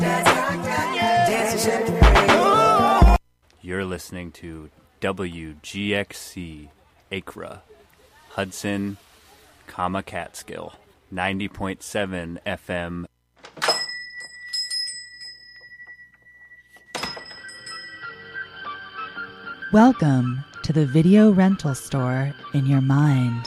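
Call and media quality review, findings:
Clock drift buffer slips: regular click/pop roughly every 2.12 s, 0.76 to 21.9 s, about ten events. Likely two devices on independent clocks, drift around 70 ppm, a few samples dropped or repeated per slip. Unlike packet-loss or dropout clicks, spacing is metronomic and the clicks occur only under signal.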